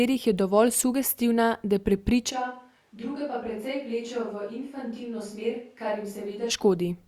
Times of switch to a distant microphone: 2.33-6.49

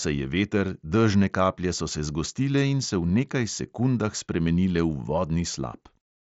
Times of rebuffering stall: none

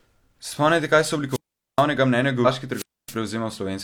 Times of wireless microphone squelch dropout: 1.29-1.84, 2.71-3.16

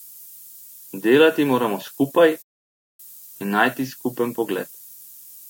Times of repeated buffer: none

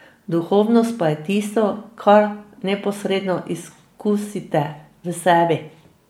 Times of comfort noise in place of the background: none

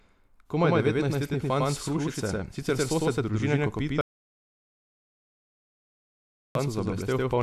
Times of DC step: none

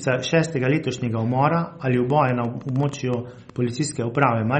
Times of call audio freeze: none

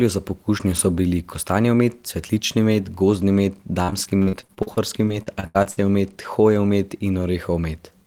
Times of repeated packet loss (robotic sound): 3.83-5.79

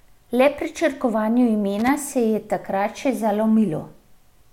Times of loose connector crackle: 1.79-1.88

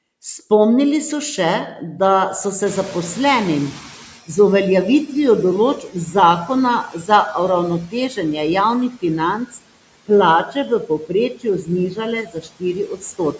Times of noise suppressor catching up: 2.66-4.19

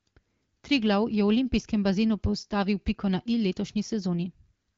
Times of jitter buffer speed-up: none

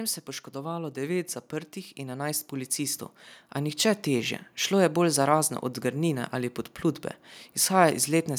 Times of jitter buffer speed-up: none

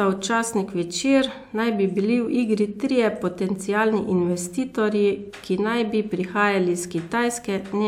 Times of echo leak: none

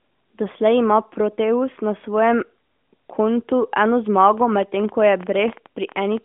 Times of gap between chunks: none

